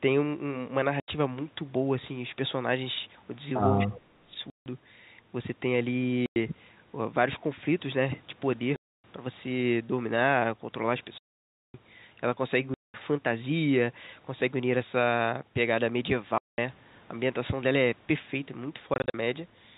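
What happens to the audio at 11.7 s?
Packet loss filled with silence runs from 11.18 to 11.74 s: the receiver substituted silence for about 0.56 s of missing speech, consistent with 20 ms packets, leaving a hard-edged gap.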